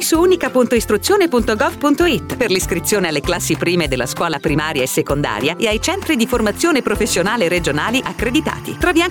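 From 5.81 s to the end of the clip, linear timecode running at 24 frames per second leaks in from a neighbouring track or cable, a fault known as timecode bleed. Its square-wave code flips between tones of roughly 1 and 2 kHz as it encodes each frame, sitting around 25 dB below the wanted sound. The result is a steady, chirping warble running continuously behind the audio.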